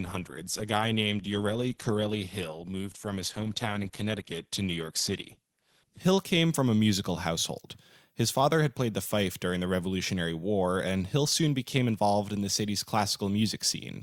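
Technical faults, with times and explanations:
0.0–6.0 s, adaptive stream starting at a low bitrate: dull, smeared speech with nothing above 12.1 kHz, consistent with roughly 16 kbit/s Opus, then a sudden gapless lift when the player steps up.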